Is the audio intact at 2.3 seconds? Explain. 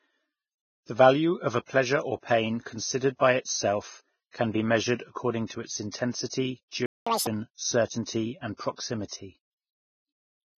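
No. At 2.3 seconds the speech carries Vorbis compression, which runs through the whole clip, so the damage there is part of a constant condition rather than a local event. The codec likely ran at a low bitrate, around 15 kbps. It lowers the cut-off and quantises the remaining treble so coarsely that fine detail turns into noise of similar energy. The result sounds dull, hissy and grainy, with roughened tones and smeared consonant onsets.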